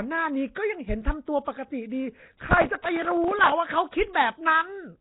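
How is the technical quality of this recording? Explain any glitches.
The recording has two faults: codec damage throughout, plus a burst of crackle in the middle.

Nellymoser compression, whole clip: the speech sounds hissy and smeared, with nothing above 3.9 kHz, likely from Nellymoser Asao's fixed low-bit block coding, which fits about 16 kbps.

Processor overload crackle, 2.17 to 3.52 s: dozens of tiny buffers, each about 3 ms, missed their deadlines and replayed old audio with hard edges, causing gritty tearing.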